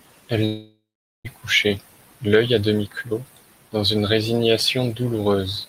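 From 0.45 to 1.27 s, likely a long network dropout: a fading buzz, then 0.44 s of silence, losing 0.8 s of speech before "couché l'œil a demi".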